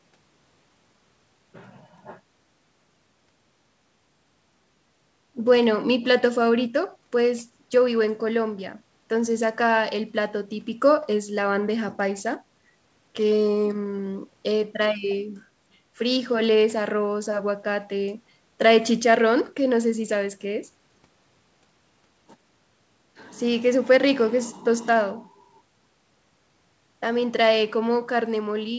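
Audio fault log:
No faults found; the speech shows only normal call-path character, with the call microphone processing and a WebRTC call path consistent with G.722 at 64 kbps leaving nothing above 8 kHz.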